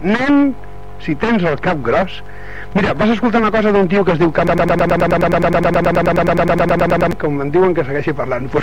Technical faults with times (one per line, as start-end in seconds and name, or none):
4.47-7.12 broken-record loop